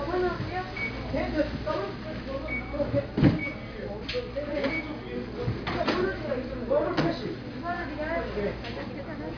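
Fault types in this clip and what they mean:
No technical faults can be heard in these sounds, and the signal stays stable and continuous throughout.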